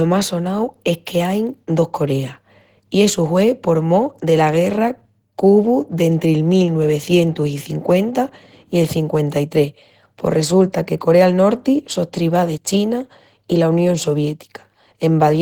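Opus compression runs through the whole speech clip, likely from a low-rate encode near 16 kbps in the codec's hybrid speech mode. Bandwidth stays open to about 20.1 kHz, but starved bands are filled with noise, leaving the sound plainly hoarse, grainy and rough.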